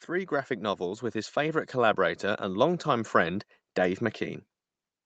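From 0.07 s to 4.49 s you can hear automatic gain rising: the call's gain control decided the speech was too quiet and slowly pushed its level up by about 8 dB, so the voice and the room behind it swell together across those four-odd seconds.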